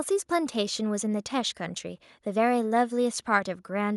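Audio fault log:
Nothing to log here, as this bit of speech comes across without a single fault to note.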